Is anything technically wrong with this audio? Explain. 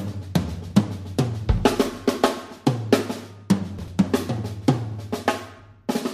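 Yes. From 3.79 to 4.16 s, compressed frames are skipped. The decoder drops whole frames, so about 0.4 s of audio vanishes and the sound jumps ahead.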